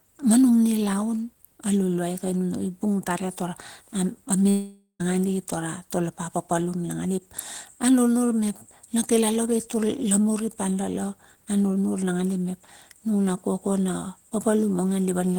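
A long network dropout at 4.49 to 5.01 s: the sound fades into a buzz, then silence, likely from half a second lost in transit.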